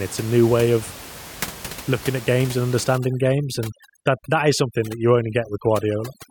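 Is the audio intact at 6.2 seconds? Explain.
No. At 6.2 seconds the background drops and breaks up into twinkling, warbling specks. This is overdone noise removal, running from about 2.98 s, just after "looking at games and", to the end at 6.30 s. A noise reducer set too strong is suppressing individual frequency bands near its estimate of the room noise, which sits about 17 dB below the speech, and quieter parts of the voice vanish along with it.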